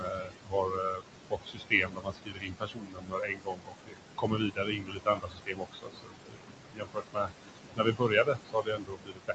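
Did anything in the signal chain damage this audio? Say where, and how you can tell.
Yes, at the call-processing stage, where noise suppressor artifacts run through the whole clip. Room noise sitting only about 7 dB below the speech is pushed down by about 21 dB between phrases and returns under them. A spectrogram shows flickering, patchy background bins.

Speech cut by the noise suppressor also occurs from 0.0 to 7.32 s and again from 7.76 to 9.34 s. Quiet speech is mistaken for noise and dropped by up to about 22 dB, so consonants and endings sound swallowed. The waveform shows truncated tails, and the spectrogram shows faint components gated away.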